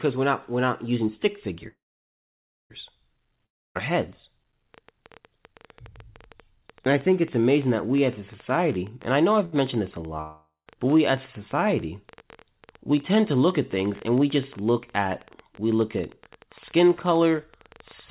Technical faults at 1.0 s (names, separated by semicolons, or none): none